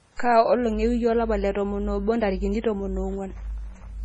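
From start to finish, nothing sounds above 10.2 kHz. The treble stops flat there. Quiet detail flickers in and out, giving a watery, swirly texture, with metallic chirps on s sounds. Heavy MP3 compression is the likely cause, which fits a bitrate near 24 kbps.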